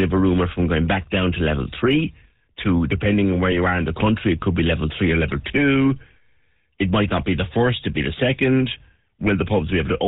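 The whole clip carries the sound of the GSM full-rate codec. Nothing above 4 kHz comes through, and the speech has the characteristic buzzy, gravelly texture, plainly audible throughout. The codec rebuilds speech from a vocal-tract filter excited by a sparse, regularly spaced pulse train that keeps only a third of the excitation samples. That coarse excitation is the source of the roughness, and the character fits the 13 kbps full-rate mode.

From 3.52 to 3.58 s, between "to depending on where" and "are in the country", GSM bit errors break the speech into a brief squawking, gargled burst. Corrupted filter, pitch or gain parameters reached the decoder, distorting the spectrum and level of the affected frames. The 64 ms span fits a few consecutive corrupted frames, and the damage points to a bit error rate of under about 1% on a weak link.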